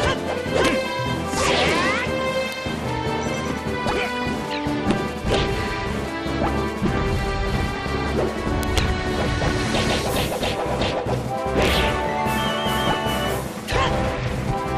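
At 2.52 s a single sharp tick cuts through the sound, and a second, louder one follows at 8.63 s. Both are bit error spikes: in each case a flipped bit in memory or along a digital link pushed two consecutive samples up by a power of two before they snapped back. The first peaks at about -9 dBFS, the second at about -3 dBFS. Each is broadband and bears no relation to the surrounding material.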